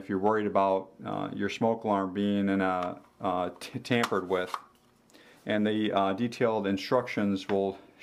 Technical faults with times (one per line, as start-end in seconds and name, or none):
none